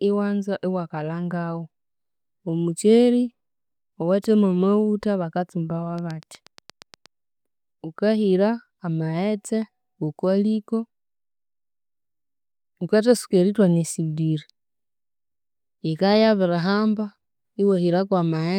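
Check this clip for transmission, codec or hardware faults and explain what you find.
One fault is audible: a train of clicks from 5.98 to 7.07 s. About ten evenly spaced clicks arrive at 8.4 per second, peaking a few dB above the speech, likely from electrical interference or a faulty connection or power supply. They sound like a steady ticking. A spectrogram shows thin vertical broadband lines, and the waveform shows matching sharp spikes.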